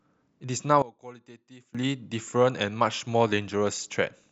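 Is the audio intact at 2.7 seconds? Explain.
Yes, at 2.7 seconds the speech runs through intact, with no dropout, click, distortion or other fault audible at that moment.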